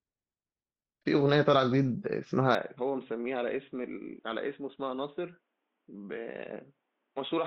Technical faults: input switched to a poorer device

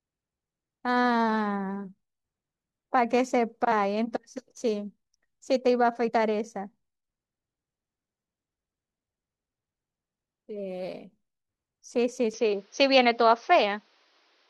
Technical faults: compressed frames skipped; input switched to a poorer device

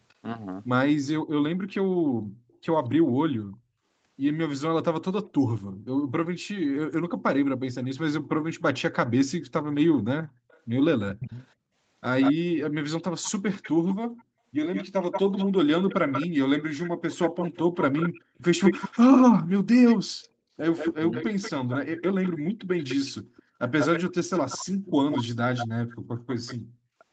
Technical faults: background gated by the echo canceller; echo leak; speech suppressed in double talk

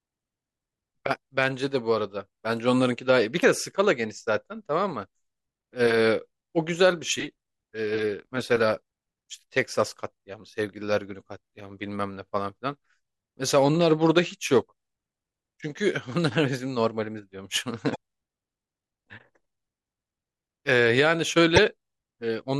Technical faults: damaged data in a compressed stream

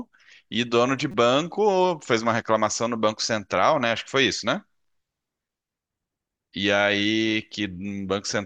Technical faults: corrupt frame decoded

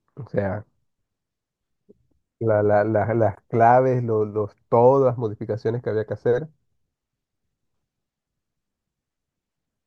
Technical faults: chunks out of order

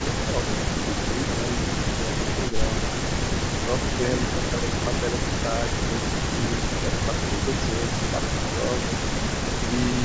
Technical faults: speech suppressed in double talk; echo leak

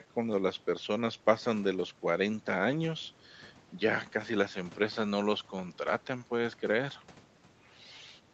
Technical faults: none

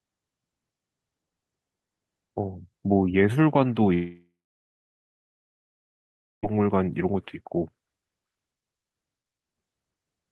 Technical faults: long network dropout

